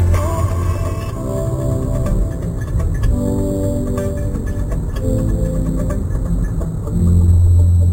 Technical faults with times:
0.00-7.93 imaging from sample-and-hold upsampling

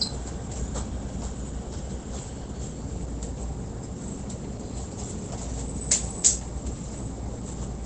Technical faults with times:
0.00-7.85 Opus compression

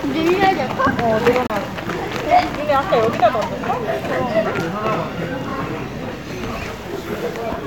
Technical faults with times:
1.47-1.50 Bluetooth dropout

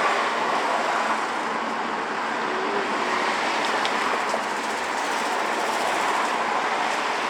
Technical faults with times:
none

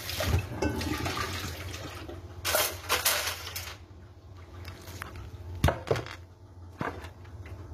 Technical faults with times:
0.00-7.73 HE-AAC compression

